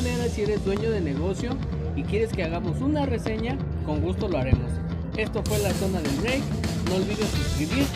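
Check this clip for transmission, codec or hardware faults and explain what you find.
Three loud pops, at 0.77–0.80 s, 3.27–3.30 s and 4.53–4.56 s. A sudden voltage pulse, likely from a switch, connector or static discharge, enters the chain. Each is a single sharp pop about 10 to 15 dB above the sound, which continues underneath.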